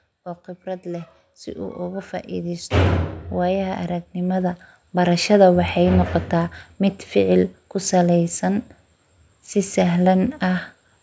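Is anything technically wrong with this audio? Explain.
Yes, there's one problem. From 0.63 s to 5.4 s you get automatic gain rising: the automatic gain control decided the input was too quiet and kept pushing its gain up, by about 13 dB in total, until things settle just before "waxey noqota". Because it's boosting the whole signal rather than just the speech, the voice and the background noise swell up together, a slow creeping lift instead of a sudden jump.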